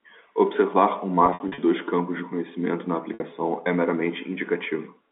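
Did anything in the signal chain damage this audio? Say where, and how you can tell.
Yes. From 1.26 to 1.58 s the speech turns briefly held and buzzy several times, and again from 3.14 to 3.20 s. This is packet loss with pitch repetition, a network-stage fault. In the first stretch about 180 ms went missing across 320 ms, in gaps of up to 60 ms. The second is a single 60 ms hole. At each gap the receiver looped the last pitch period and faded it out, which produces the buzz. The G.711 telephone band, 200 Hz to 3.6 kHz, can be heard throughout.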